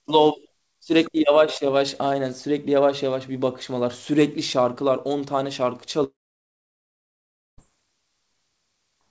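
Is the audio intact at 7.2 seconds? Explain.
No, 7.2 s falls inside a long network dropout from 6.04 to 7.60 s, likely from packets that stopped arriving. The receiver stretches the last speech into a brief fading buzz, then about 1.45 s of silence, and the speech resumes at 7.60 s with that stretch missing.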